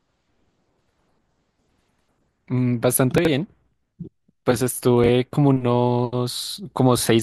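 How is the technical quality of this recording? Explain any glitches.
The speech has two brief glitches. Chunks out of order, at 3.18–3.27 s and 5.04–5.09 s: a 23.2 ms block played three and then one chunk late, creating hard joins heard as a jumbled moment.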